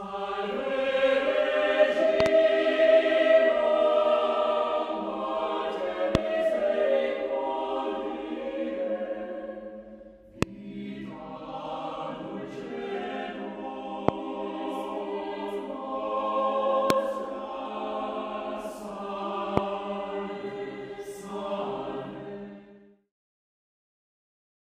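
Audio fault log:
2.20–2.28, 6.15–6.17, 10.43–10.45, 14.09–14.11, 16.90–16.92, 19.57–19.60 s: loud pop. Sharp pops peak about 20 to 25 dB above the sound, a double pop at 2.20 s and single ones after. These are likely voltage spikes from a connector, switch or static discharge, shaped into brief thumps while the sound continues underneath.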